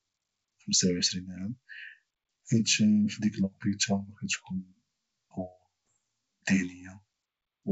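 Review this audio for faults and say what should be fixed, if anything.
Around 5.89 to 5.93 s there's a short rough pop from bit errors on the ADPCM link: a few flipped bits upset the G.722 decoder's step size and predictor, so the disturbance rings on briefly. Adding error protection or a cleaner link would stop it.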